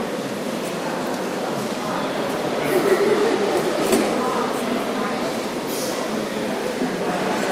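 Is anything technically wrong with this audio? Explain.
Yes. From 1.75 s to the end, an adaptive stream at a lower bitrate: the stream steps down mid-clip. Codec artefacts grow, which fits a drop from 64 to 32 kbit/s. The switch is abrupt with no gap, unlike a dropout.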